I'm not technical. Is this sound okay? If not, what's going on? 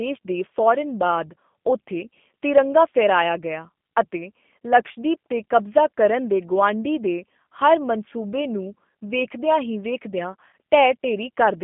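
No, not quite. The whole clip goes through the G.729 codec, a low-data phone codec that rebuilds the speech from a rough model of the voice instead of sending the actual sound. You can clearly hear it: the speech is understandable but a bit rough and synthetic, and it sounds thin because everything above about 3.5 kHz is gone.

Near the end, from about 10.51 to 10.53 s, there's VoIP packet loss concealed by the speech codec. About 20 ms of audio went missing in transit, and the decoder filled the gap by stretching what it had just heard into a brief, fading buzzy or noisy smear. The speech takes a moment to sound normal again afterwards.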